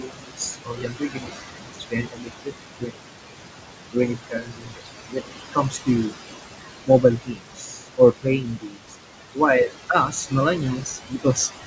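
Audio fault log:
throughout, noise suppressor artifacts: with room noise only about 6 dB under the speech, the suppressor pulls the background down by about 19 dB, frame by frame. The noise sinks in pauses and surges beneath speech.
0.00–2.98 s, 3.81–6.13 s, 6.61–8.96 s, 9.89–11.38 s, speech cut by the noise suppressor: the suppressor treats quiet speech as noise and cuts it by about 20 to 22 dB. Affected stretches total roughly 2 s, 1 s, 1.5 s and 0.7 s. Soft consonants and word endings sound swallowed or faint.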